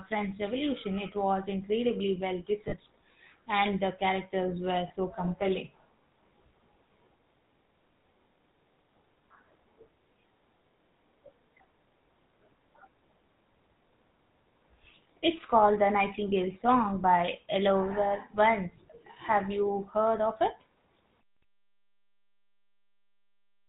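GSM full-rate codec coding runs through the whole recording. The buzzy, gravelly texture points to the original 13 kbps full-rate coder. It models the vocal tract as a filter and drives it with a sparse train of regular pulses, keeping only every third excitation sample. The damage is plainly audible: voices take on a rough, grainy edge, and nothing above 4 kHz survives, so sibilants and breath sound dull and clipped at the top.

Lost GSM frames cause two brief dropouts. The first, from 2.68 to 2.74 s, covers about 40 ms, which suggests two missing frames. The second, from 4.88 to 4.91 s, covers about 20 ms, pointing to a single frame. In each gap the decoder reuses the parameters of the last good frame, so the voice is briefly held as a short metallic ring instead of going silent.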